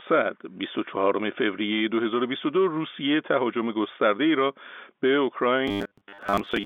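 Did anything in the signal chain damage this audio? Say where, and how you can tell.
Yes. From 5.68 to 6.66 s the speech turns into a rigid, metallic robotic buzz at 100 Hz from repeated short buffers. That fits 10 ms chunks repeated about half the time, likely a starved driver or playback buffer. Unlike codec smearing, the buzz stays at a fixed rate rather than tracking the speech.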